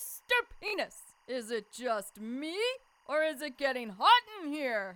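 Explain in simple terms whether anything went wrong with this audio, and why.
Two things went wrong. First, timecode bleed: a timing signal from a nearby track or cable leaked into the recording. That signal is a buzzy square wave flipping between pitches around 1 and 2 kHz, and its rhythm fits film-rate timecode at 23.976 frames per second. It sits faintly behind the sound for the whole clip as a steady chirping, warbling whistle that never stops.

Second, a Bluetooth stutter from 0.68 to 0.74 s. Part of the wireless stream arrived late or not at all, roughly 43 ms of audio, which fits about two lost packets. While waiting, the receiver kept replaying the last short slice it had, so you hear a brief rapid buzz, like a tiny machine-gun rattle. When the stream catches up, the sound jumps ahead as if it had kept playing, skipping the missing moment.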